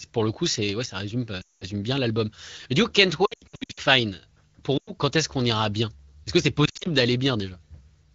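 Speech coded with AMR wideband has lost AMR speech frames at 1.41–1.65 s, 3.25–3.80 s (scattered short dropouts), 4.77–4.91 s and 6.65–6.88 s. The decoder repeats the last good frame at falling gain, so the sound smears and then fades. On a spectrogram this shows as stretched, flat harmonics thinning into gaps, and on the waveform as a sagging envelope.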